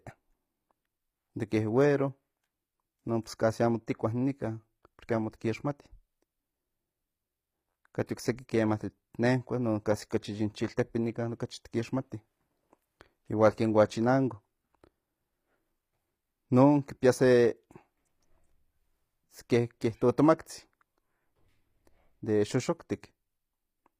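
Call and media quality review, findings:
HE-AAC compression, throughout. Sibilants gritty and metallic, plainly audible. Treble synthetic. Nothing above 15.5 kHz. Likely cause: spectral band replication. Upper band rebuilt from copied lower bands under a coarse envelope, so harmonics misalign at the crossover. Damage level fits a low bitrate near 24 kbps, HE-AAC v2 class.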